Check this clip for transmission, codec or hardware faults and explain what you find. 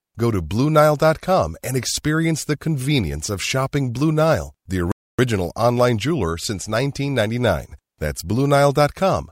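One fault is present. A playback stall runs from 4.92 to 5.19 s, where the speech cuts out mid-flow for about 0.27 s, likely because the player ran dry of buffered data or its thread was blocked. The audio then resumes with "online jeweler since".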